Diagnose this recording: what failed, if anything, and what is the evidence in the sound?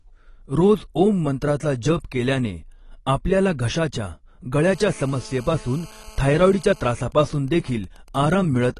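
Codec stage. The speech sounds dull and smeared, with nothing above 12 kHz throughout. This is likely AAC compression, consistent with roughly 32 kbps AAC-LC.

Analogue wiring. After "केल्याने आपल्याला घशाच्या", a hard 217 Hz GSM phone buzz runs from 4.64 to 6.92 s, about 26 dB down. The wiring is rectifying a nearby phone's call transmissions.

Analogue wiring again. From 7.00 to 8.69 s, even ticks with a longer 217 Hz buzz twice a second sit roughly 25 dB down. These are GSM signalling bursts from a phone whose user has gone silent during the call.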